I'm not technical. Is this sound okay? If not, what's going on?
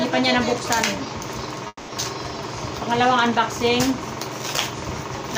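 No. At about 1.67 s the audio stream was likely held up for a moment, a call audio freeze, and the receiving end ran out of sound to play. It filled the gap by stretching the last bit of sound into a fading buzz for about 0.21 s, then went quiet briefly before normal audio resumed at 1.90 s. Nothing is lost; the sound just picks up where it stopped, now running slightly later.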